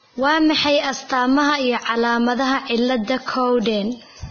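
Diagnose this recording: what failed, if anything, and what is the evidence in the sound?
Codec stage, throughout the speech. There's nothing above about 6.5 kHz, and the top end that survives is hissy and grainy, with roughened tones and smeared consonant attacks. That's likely heavy Vorbis compression, fitting a bitrate under 20 kbps, coarsely quantising treble detail into noise.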